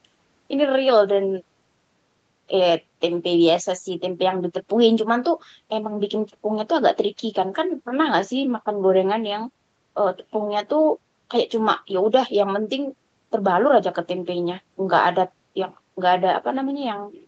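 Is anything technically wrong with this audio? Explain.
No, nothing is technically wrong with this audio.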